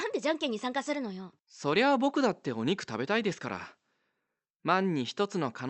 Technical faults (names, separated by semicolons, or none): none